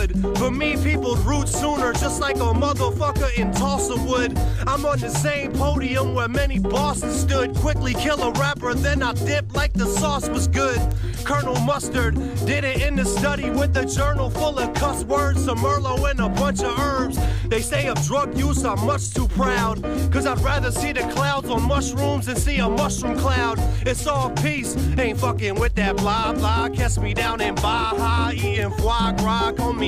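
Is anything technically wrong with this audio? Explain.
Yes. Bit error spikes at 10.92, 15.32 and 28.62 s: a flipped bit knocks one or two samples off by a power of two before they snap back, peaking at about −10, −28 and −10 dBFS. Each is a single sharp, broadband tick unrelated to the surrounding sound.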